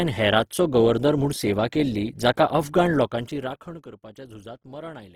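From start to finish, the speech carries plainly audible coding damage. It sounds rough and grainy rather than swirly. The likely cause is Opus compression in its music (CELT) mode. At a low rate, the encoder keeps each band's energy but fills starved bands with folded or noisy content. That turns clean detail into grit. The top end stays open to about 20.2 kHz. The texture fits a rate near 16 kbps.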